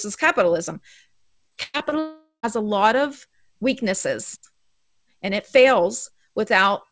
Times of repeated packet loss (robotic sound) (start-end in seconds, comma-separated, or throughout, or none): 1.50-1.93